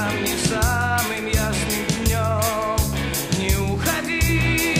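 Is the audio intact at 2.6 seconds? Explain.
Yes, at 2.6 seconds the audio is intact, with no dropout, click, distortion or other fault at that point.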